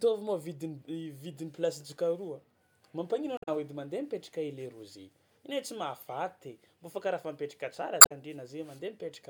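At 3.37 to 3.49 s and again at 7.98 to 8.12 s, the speech breaks into a short chirp or squawk, the sound of damaged data in a compressed stream. Corrupted bytes leave the decoder misreading frames until it resynchronises on a later frame header. On a spectrogram each event shows as a narrow vertical smear of broadband or oddly striped energy lasting about a tenth of a second, and the waveform shows an abrupt discontinuity in the envelope.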